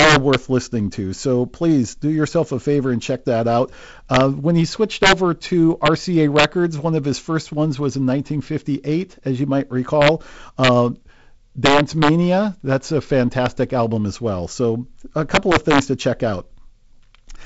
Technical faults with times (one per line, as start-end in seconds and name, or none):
0.00-17.45 integer overflow